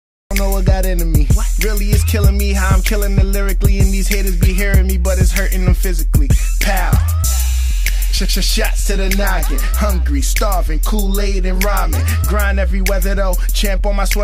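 The clip has a cut-off start. Digital silence runs to 0.31 s, then sound begins abruptly mid-stream, with no natural attack, because capture started late.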